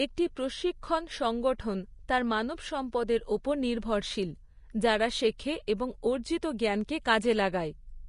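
Likely low-bitrate Vorbis compression, consistent with roughly 34 kbps, runs throughout: nothing remains above 10.6 kHz, and coarsely quantised treble leaves plainly audible hiss and graininess across the speech. At 1.58 s, just after "একটি প্রশিক্ষণ", pre-echo occurs: the codec spread quantisation noise across a block, so a brief hiss of about 11 ms smears in ahead of an attack.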